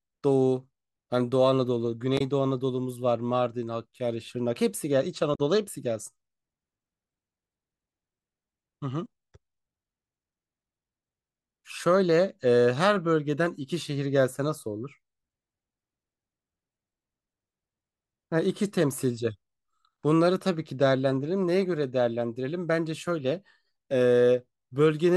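At 2.17 to 2.21 s and again at 5.34 to 5.40 s, the speech breaks into a short glitch from damaged data in the compressed stream: corrupted bytes leave the decoder unable to read those frames, so it loses sync and emits garbage until it locks onto a valid frame header again.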